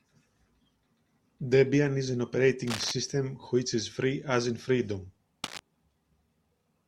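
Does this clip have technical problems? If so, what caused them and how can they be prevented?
Yes, cable scratch noise appears twice in this speech clip. The likely cause is a worn cable, connector or control being disturbed, so its contact resistance fluctuated rapidly. That shows up as dense, uneven bursts of scratchy rustling laid over the speech from 2.67 to 2.92 s and again from 5.44 to 5.61 s, roughly 10 dB below the speech level. Replacing or cleaning worn cables and connectors, and keeping them still while recording, prevents this.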